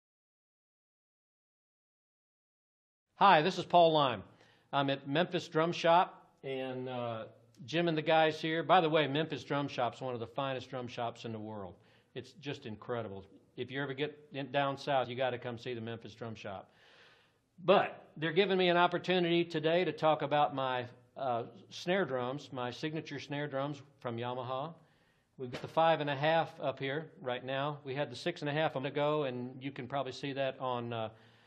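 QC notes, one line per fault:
15.04–15.06 s, 25.53–25.55 s and 28.83 s, compressed frames skipped: the audio jumps ahead by roughly 50, 100 and 200 ms, about two, four and ten whole frames of 23.2 ms each, which fits 1024-sample frames.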